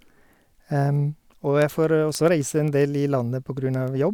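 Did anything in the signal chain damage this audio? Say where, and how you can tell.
Yes. Through the speech, from 0.16 s to 4.01 s, there is a train of sharp ticks, around thirty of them, recurring about every 0.15 s at a steady rate. These are word clock ticks, introduced at the digital interface into the converter. The receiving device runs on its own clock, not locked to the sender's, which points to a mismatch on the order of 150 ppm. Each time the two clocks slip a full sample, one sample is dropped or repeated and the waveform jumps, producing a tick.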